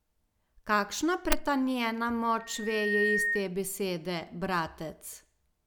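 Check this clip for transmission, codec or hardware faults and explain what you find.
One fault is present: loudspeaker feedback squeal from 2.39 to 3.49 s. A 1.8 kHz tone swells over about half a second to a few dB above the speech, as mic-to-speaker loop gain exceeds unity.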